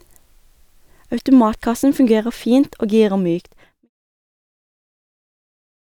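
Nothing stood out on listening to this speech, apart from a smooth fade-out that begins around 3 s and reaches silence by 3.9 s.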